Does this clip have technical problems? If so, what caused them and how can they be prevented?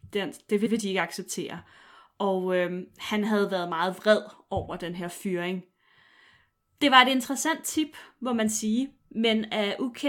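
Yes. Repeated frames at 0.65 to 0.74 s: a 92.9 ms block of speech plays twice, a short stutter, which fits four compressed frames being written or sent again. The clip gains 92.9 ms. Prevent it by deduplicating frames by sequence number or timestamp before decoding.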